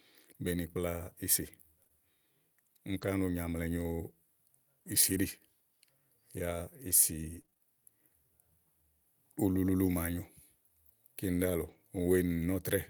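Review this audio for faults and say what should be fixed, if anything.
Between 1.83 and 7.62 s there are scattered short gaps: about seven tiny dropouts, none longer than about 20 ms. That's 140 ms of missing speech, covered by 160 ms of receiver concealment that simply continues the last sound, so you hear brief ticks and little smears. A deeper jitter buffer and a cleaner network path would stop these holes from appearing.

At 11.68 to 11.74 s there's a lost packet rebuilt from error correction. The loss fits two packets, and the decoder filled the 40 ms from the low-bitrate backup copies Opus carries in the following packets, so there's no gap, just a rougher, noisier patch. Cutting packet loss on the link is the real fix, since the backup copies only hide it.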